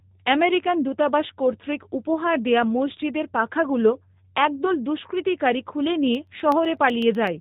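Throughout the speech, G.729 codec damage is plainly audible, consistent with an 8 kbit/s rate. The sound is rebuilt from a vocal-tract filter and sparse pulses, so it is rough and slightly synthetic. A spectrogram shows nothing above 3.8 kHz.

From 6.15 to 7.27 s, just after "পাখাগুলো একদল দুস্কৃতিকারী খুলে", periodic USB or driver dropouts recur every 0.125 s. Each blanks a fraction of a millisecond to silence and is heard as a regular tick. The waveform shows tiny evenly spaced gaps, and the spectrogram shows faint vertical lines.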